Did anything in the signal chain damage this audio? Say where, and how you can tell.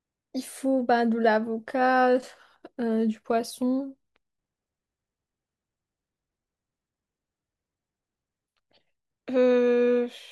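No, nothing in this speech recording points to damage anywhere along the chain, so there's nothing here to track down.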